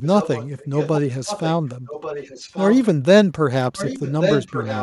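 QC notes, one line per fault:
0.02–1.0 s, 1.25–1.52 s, 1.86–2.86 s: echo leak. A second copy of the speech trails the original by about 1.13 s, sitting roughly 10 dB down. That's likely a far-end speakerphone whose echo canceller let some of its mic pickup slip back to us.
3.76 s to the end: echo leak again, same 1.13 s lag, but louder now at about 5 dB below the speech.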